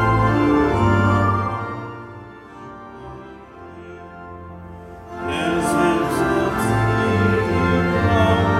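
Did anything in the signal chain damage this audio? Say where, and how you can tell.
No, nothing in the signal chain damaged this audio, so there is no stage to point to and no evidence of a fault to show.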